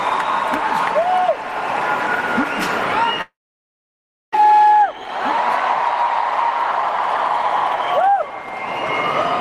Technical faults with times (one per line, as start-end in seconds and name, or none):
3.21-4.36 long network dropout